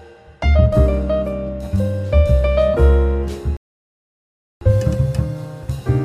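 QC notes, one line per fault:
3.57–4.61 s, rebuffering stall: playback drops to silence for about 1.05 s as the player's buffer empties, then resumes exactly where it stopped, with nothing lost.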